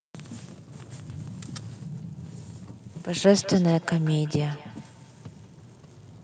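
Feedback echo between two devices from 2.9 s: another device's playback re-enters this microphone, repeating the speech roughly every fifth of a second, about 19 dB down.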